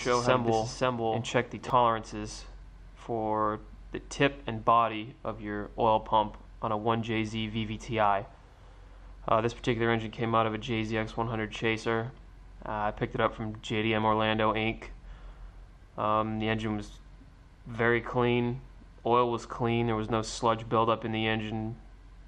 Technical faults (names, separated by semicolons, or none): doubled audio track